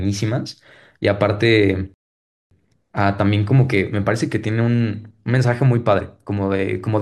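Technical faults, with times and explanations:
1.94 to 2.51 s, rebuffering stall: the speech drops to silence for 0.57 s while the player waits for more data, then resumes exactly where it left off.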